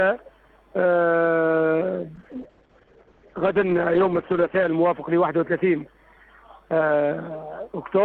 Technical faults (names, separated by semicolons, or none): call bitrate drop